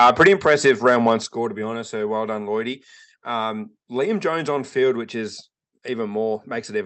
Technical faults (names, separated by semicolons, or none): microphone overload; microphone volume stepped down